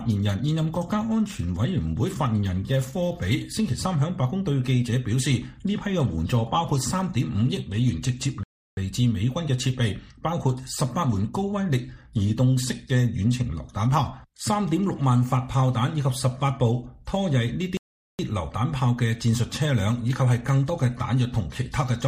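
At 8.43 s the audio halts in a rebuffering stall: playback drained its downloaded data and waited, so silence runs until 8.77 s, about 0.34 s, before the sound picks up at exactly the point it left. A second stall follows from 17.77 to 18.19 s, about 0.42 s. Nothing is skipped; time is simply inserted. On a waveform each appears as a flat gap, and a spectrogram shows a clean, empty vertical band.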